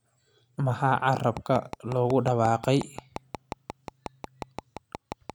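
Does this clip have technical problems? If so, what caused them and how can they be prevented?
Yes. A train of clicks runs from 1.37 to 5.31 s: about twenty evenly spaced pops at 5.6 per second, peaking around 10 dB above the speech. They're likely from interference or a faulty connection or power supply. On a spectrogram they show as thin vertical broadband lines, and on a waveform as regular spikes. Prevention: keep cables away from interfering equipment and check the interface's connection and drivers.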